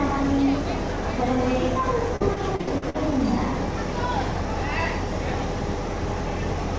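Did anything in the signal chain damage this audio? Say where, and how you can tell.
Yes, at the network stage: repeated packet loss (robotic sound) from 2.16 to 2.96 s. Seven gaps, the longest 60 ms, were patched by extending the previous sound, so about 30% of that stretch is concealment. On a spectrogram this appears as smeared, repeated frames, with the usual 8 kHz ceiling of the call codec.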